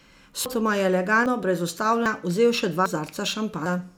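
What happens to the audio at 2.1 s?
Audio missing between chunks at 2.06 s: the speech skips forward abruptly, losing about a fifth of a second, likely dropped while the recorder switched between 1-second chunks.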